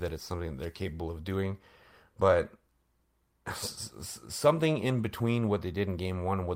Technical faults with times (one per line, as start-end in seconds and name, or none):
none